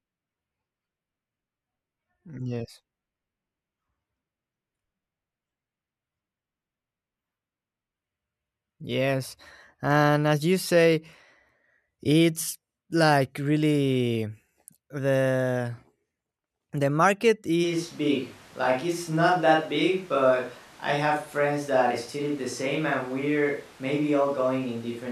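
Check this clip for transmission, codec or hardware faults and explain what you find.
One fault is present. A switch to a distant microphone occurs at 17.65 s, right after "the market," and lasts to the end. The close microphone's signal likely dropped out, leaving a farther pickup. The speech turns roomy and hollow with thinner bass, at roughly the same level, and background noise rises to about 25 dB below the speech.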